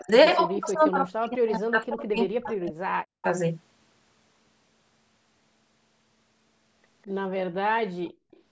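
From 0.00 to 0.11 s, and again from 0.48 to 3.24 s, the speech dips and breaks into pieces, falling by as much as about 40 dB. This is speech suppressed in double talk, likely because an echo canceller treated overlapping talk as echo and turned it down.

At 8.06 to 8.12 s and 8.31 to 8.41 s, a very faint echo leak appears: brief scraps of the voice returning 201 ms late, far below the main speech. Part of a loudspeaker's output likely reached a microphone and escaped cancellation.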